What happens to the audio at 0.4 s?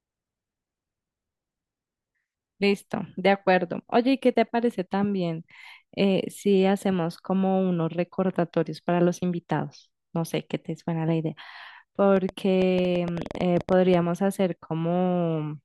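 Nothing goes wrong at 0.4 s; the speech plays through that moment intact, with no dropout, click or distortion.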